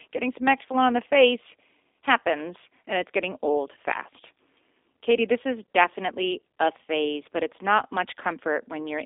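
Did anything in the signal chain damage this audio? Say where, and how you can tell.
Yes, at the codec stage: the speech runs through a G.729 codec for its full length. Nothing sounds above about 3.7 kHz, and the band sits roughly between 250 Hz and 3.6 kHz, a narrow telephone line. The voice is plainly rough and synthetic, which points to the 8 kbit/s G.729A variant. The codec rebuilds each 10 ms frame from a vocal tract filter, a pitch predictor and a few pulses instead of the original waveform, so fine detail is lost.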